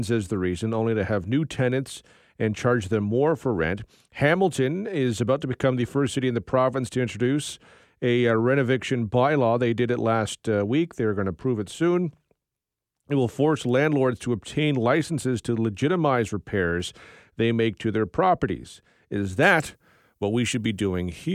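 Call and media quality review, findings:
Pre-emphasis left on, 19.43 s to end: speech turns thin, bright, sibilant. Treble about 10 dB high at 10 kHz relative to 1 kHz, matching a 50 µs FM curve. Likely de-emphasis stage skipped in receive or playback chain.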